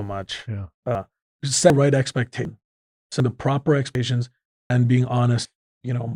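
Audio missing between chunks at 0.95, 1.70, 2.45, 3.20 (just before "the proper"), 3.95 (just after "the proper"), 4.70 and 5.45 s of this speech clip: regular skips where roughly a third of a second vanishes and the two sides butt together, likely from a recorder dropping audio while switching between 1-second chunks.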